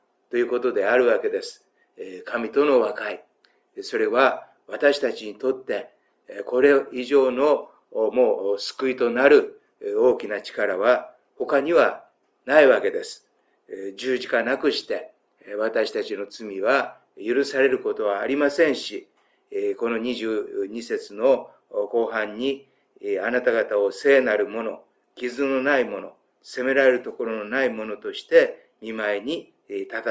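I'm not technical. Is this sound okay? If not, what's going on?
Yes, it sounds fine; nothing here needs fixing.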